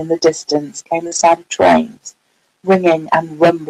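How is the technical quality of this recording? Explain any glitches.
The speech has two overlapping packet-loss glitches, both between about 1.07 and 1.25 s.

Short concealed packet loss, 1.07 to 1.13 s: about 40 ms never arrived, and the receiver extended the preceding sound to cover it before blending back. You hear a brief smear or wobble. Unlike the later stretch, this is invented continuation rather than real content.

Lost packet rebuilt from error correction, 1.11 to 1.25 s: the decoder replayed low-bitrate backup copies carried in the following packets, rebuilding about 80 ms, which fits four 20 ms frames. There is no gap, but the sound turns rougher and noisier instead of smearing.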